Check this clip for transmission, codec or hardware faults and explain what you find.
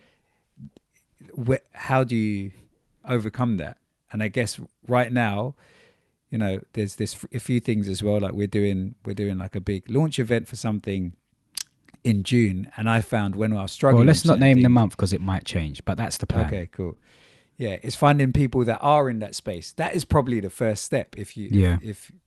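Four faults are present in this speech clip, all from timing and delivery rather than hardware, heard over an Opus-style call path whose top end stops near 12 kHz, which fits a bitrate around 32 kbps.

Clock drift between sender and receiver runs through the whole clip. The sender's clock is slow, by roughly one and a half percent, so the receiver's jitter buffer keeps draining. The result is a faint, persistent unsteadiness in pacing rather than any single obvious event.

Repeated timing corrections run from 0.22 s to 22.16 s. To compensate for the slow sender, the receiver keeps inserting short stretched pieces, playing at about 99% speed and adding around 200 ms overall. These edits are unevenly spaced, heard as slight hiccups and a subtly dragging tempo.

Scattered short gaps fall between 6.42 s and 9.45 s. About five late or lost packets were each patched by extending the preceding sound, roughly 50 ms in total, none longer than about 10 ms. 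Nothing is actually lost, but brief ticks or smears appear.

A short stall from a late packet occurs from 16.94 s to 16.98 s. The buffer ran empty, so the receiver held the last sound for 18 ms until the packet arrived, then resumed in place. That moment sounds briefly held, with a slight buzz or dip.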